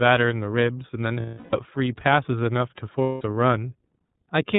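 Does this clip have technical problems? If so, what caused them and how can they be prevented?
Yes. Throughout, the speech carries the sound of the iLBC codec: nothing reaches above 4 kHz, and the voice has a slightly rough, synthetic grain. That grain comes from coding each frame's excitation on its own, and the roughness fits the 13.33 kbps mode with 30 ms frames. The grain is what separates it from plain telephone band-limiting, which would sound muffled but smooth. It can be prevented by using a wideband codec, such as Opus or G.722, where both ends support it.

There are lost iLBC frames from 1.2 to 1.55 s (330 ms) and from 3.03 to 3.22 s (180 ms), which points to about eleven and six missing 30 ms frames. In each gap the decoder repeats the last pitch cycle mixed with noise, so it sounds like a held, buzzy vowel that fades in the longer gap. Unlike a hard dropout there is no silence, and unlike codecs that depend on earlier frames, the voice comes back clean right away. 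It can be prevented by adding forward error correction or redundancy, using a larger jitter buffer, or fixing packet loss on the network.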